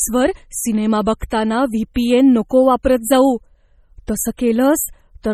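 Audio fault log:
Throughout: MP3 compression. The speech sounds watery and swirling, with metallic chirps on s sounds, smeared attacks and nothing above 14.4 kHz. This is likely heavy MP3 encoding, consistent with a bitrate near 32 kbps. A plain low-pass filter would lack the flickering, frame-to-frame artefacts.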